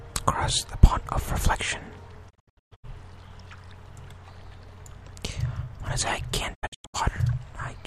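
The audio has two digital broadcast dropouts, at 2.29 to 2.85 s and 6.53 to 6.96 s. Each time, the sound fades out within 20 ms and breaks into several short silent holes, the longest 120 ms and 96 ms. The receiver is muting frames that arrived corrupted or not at all. That sound is gone.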